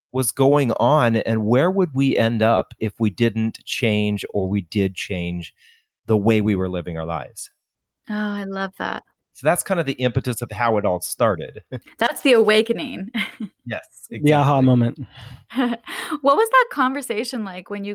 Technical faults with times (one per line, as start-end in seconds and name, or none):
2.57-2.61 short concealed packet loss
12.17-12.21 short concealed packet loss